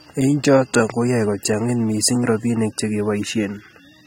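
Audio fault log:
Throughout, AAC compression: the speech sounds dull and smeared, with a fizzy, warbling texture on sibilants and sustained sounds, and nothing above 16.8 kHz. This is likely AAC-LC quantising each frame's spectrum coarsely, with damage that fits a bitrate near 32 kbps.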